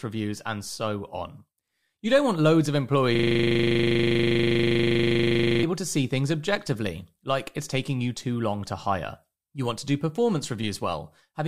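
From 3.15 s to 5.63 s the speech freezes into a system hang loop: the machine or its driver stalled while the audio hardware kept replaying the same 40 ms stretch of its buffer, about 62 times in a row. The result is a rough, rattling buzz at 25 Hz. Unlike an echo or reverb tail, each repeat is identical and never fades, and unlike scattered dropouts, the repetition is perfectly regular until normal playback resumes.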